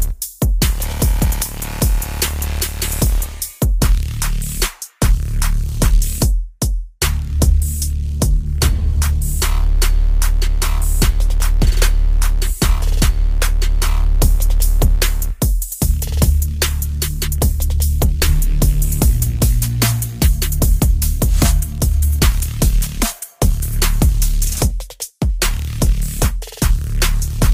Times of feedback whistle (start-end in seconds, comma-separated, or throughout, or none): none